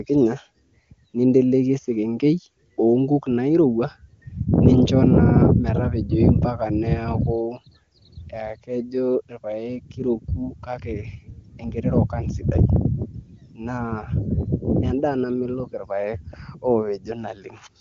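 Nothing goes wrong anywhere in this speech recording, which has the sound of an HD Voice call through the AMR wideband codec at one of its higher rates, something like 23.85 kbit/s going by how little roughness there is, with nothing above about 7.3 kHz, just where that codec's band runs out.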